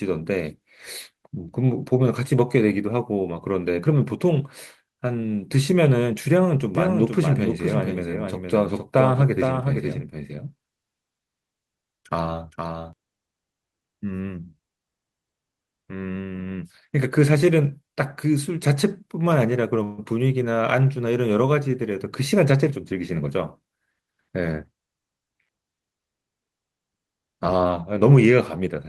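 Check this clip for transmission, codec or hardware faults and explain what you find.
Three faults appear in this speech clip: a doubled track, a brief freeze and a short speed-up.

Doubled audio track, 6.75 to 12.93 s. The speech is mixed in twice, likely because a second, slower capture path feeds the same signal into the mix. The copy trails by roughly half a second and sits about 5 dB below the original. It is full-band, with no decay or room colour, so it reads as a dry, distinct repeat. It starts and stops abruptly at the edges of that span.

Call audio freeze, 19.83 to 20.01 s. Packets were likely held up in transit, and the jitter buffer ran dry. For 145 ms the receiver stretched the last sound into a fading buzz or hiss, which never reaches silence. When the packets arrive, the speech resumes exactly where it stopped. Nothing is lost, but a gap has been inserted, and everything afterwards runs 145 ms later.

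Jitter buffer speed-up, 22.33 to 23.66 s. The buffer had built up more audio than its target, so the receiver cut tiny pitch-period slices many times in a row. About 150 ms disappears across that stretch. The speech plays at 109% of normal speed with no change in pitch, so the talker sounds briefly hurried rather than higher.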